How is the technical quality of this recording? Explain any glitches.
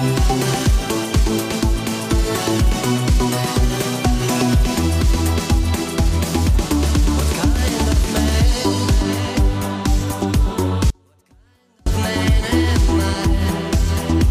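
There's one real glitch here, an audio dropout to a faint residue from 10.90 to 11.86 s, so a bit under a second. The sound cuts out abruptly mid-flow and the gap isn't silent: a faint sound carries on, something like 35 dB below its normal level. That points to the wanted feed likely being lost upstream while the path after the break stayed live, then snapping straight back rather than fading.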